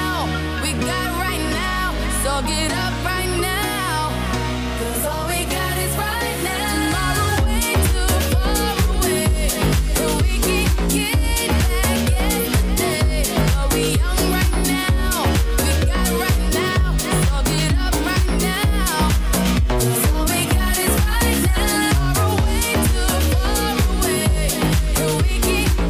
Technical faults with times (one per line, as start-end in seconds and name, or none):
16.47-18.80 crude rate conversion